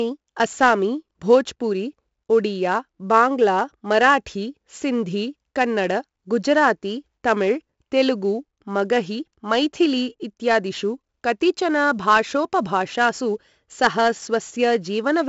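Throughout, the speech carries heavy 4-bit ADPCM compression: coarse predicted steps leave a gritty hiss that swells with every loud syllable and crunchy attacks. Nothing sounds above 7.7 kHz, fitting a 64 kbps stream. Unlike perceptual codecs, nothing swirls or warbles.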